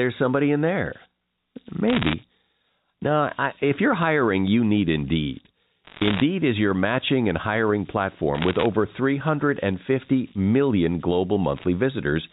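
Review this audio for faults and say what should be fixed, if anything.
Converter idle tones run through the whole clip: a whistle at around 5 kHz sits about 24 dB below the speech and is most audible in the pauses, with a grainy texture under quieter passages. An undithered delta-sigma converter falls into a repeating bit pattern when its input is small, and that pattern comes out as a fixed tone set by the input's DC offset. Adding dither at the converter and removing DC offset before it breaks up these limit cycles.

Bit errors on a digital phone line cause four bursts of crackle: 1.88 to 2.14 s, 5.84 to 6.22 s (just before "is your matching and"), 8.35 to 8.66 s (just after "your matching and hiring"), and 11.56 to 11.64 s. On the G.711 A-law link each flipped bit corrupts a single sample. Flips on the sign or upper bits produce sharp ticks. The error density is around one percent in the first burst and 1.5 percent in the second, and lower in the last two, so the speech underneath stays intact. 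A cleaner transmission path, with error detection and concealment on the line, prevents this.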